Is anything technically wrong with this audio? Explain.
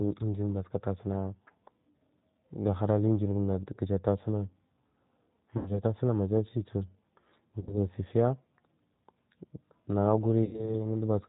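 Yes, there are two kinds of fault.

Throughout the clip, the speech sounds narrow, slightly rough and synthetic, with nothing above 4 kHz. This points to the G.729 codec at 8 kbit/s. It does not send the waveform itself. It rebuilds each 10 ms frame from a vocal tract filter, a pitch predictor and a few sparse pulses. That simplified model is what gives the voice its plainly audible rough, artificial edge.

There are also three dropouts, at 5.57–5.79 s (just before "tasunag majasibu"), 7.61–7.75 s and 10.44–10.76 s. At each one the speech smears into a buzzy tone or a coloured noise that fades, then sounds weak or distorted briefly afterward. This is VoIP packet loss concealed by the speech codec. About 90 ms, 60 ms and 90 ms of audio went missing, which fits a few lost packets each time. The decoder kept extrapolating its last pitch and filter at falling gain. Because each frame builds on the previous one, recovery lags after the audio returns.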